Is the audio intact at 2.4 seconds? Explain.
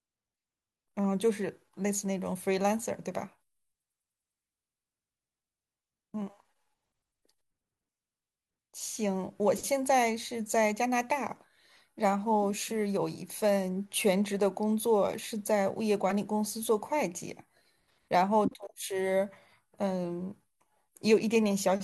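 Yes, the speech at 2.4 seconds plays through cleanly, with no dropout, click, distortion or other fault audible at that moment.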